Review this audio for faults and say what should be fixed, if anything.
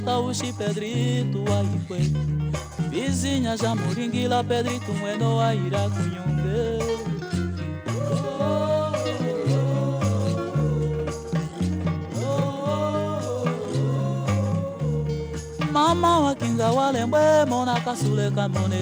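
Block size mismatch (truncated) runs throughout the clip as a steady 100 Hz buzz. One stage writes slightly longer blocks than the next reads, so each block's tail is discarded at that rate. Playback speed stays at 1.0x because very little is lost per block. To prevent it, configure every stage in the chain to use the same block size, or put a proper FIFO buffer between stages.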